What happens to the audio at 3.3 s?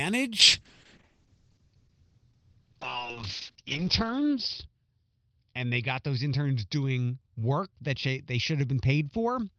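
At 3.3 s the speech is inside a call bitrate drop that starts at 0.41 s and lasts to the end of the clip. The call's bandwidth estimate fell, so the encoder coded far more coarsely. The sound points to a fall from about 32 kbps to about 6 kbps. High frequencies are cut above 6 kHz, down from 20 kHz. The speech sounds muffled and rough, with a watery edge.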